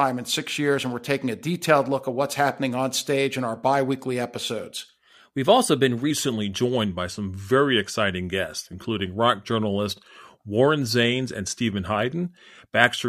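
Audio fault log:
6.11 to 13.08 s, wrong sample rate: after "also been" everything slows to about 0.92 speed and drops roughly 1.5 semitones, which fits 48 kHz audio played at 44.1 kHz.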